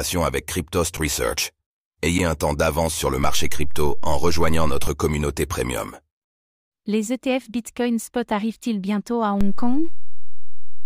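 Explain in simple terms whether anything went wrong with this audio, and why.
Two kinds of fault can be heard in this speech.

The first is an underrun with held sample, at 0.97 s and 2.18 s, the second just before "un temps d'avance sur". The playback ran out of data. The waveform froze at its last value, and the sound went silent for about a hundredth of a second. Each time a little audio was lost.

The second is a DC step, from 3.24 s to 4.87 s, between "temps d'avance sur le" and "communauté premium", and again from 9.41 s, after "bientôt à", to the end. The waveform's centre line jumps away from zero. Each jump gives a low thump, while the voice carries on unchanged.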